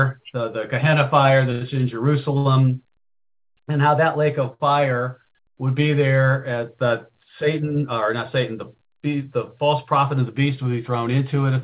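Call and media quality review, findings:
Short stalls from late packets at 1.52–1.74 s, 2.38–2.47 s, 4.54–4.62 s. Sound held about 91, 72, 61 ms. Jitter buffer ran dry and stretched audio. Nothing lost. Band-limited to 4 kHz, fitting G.711 A-law.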